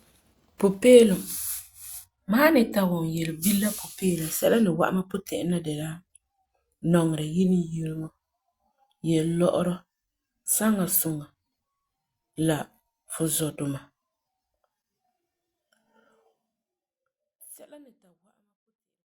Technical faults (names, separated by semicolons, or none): none